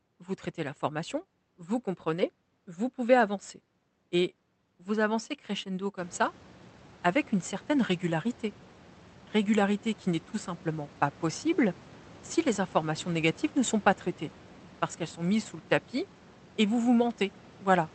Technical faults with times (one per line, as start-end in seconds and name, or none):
none